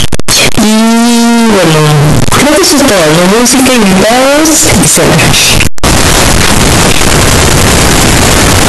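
From start to finish the speech is buried in very loud, harsh distortion, and the pauses are as loud as the talking. That is the mark of signed and unsigned mixed up, likely in 16-bit samples, where every zero crossing swings across the whole range. Ordinary clipping would leave quiet passages quiet.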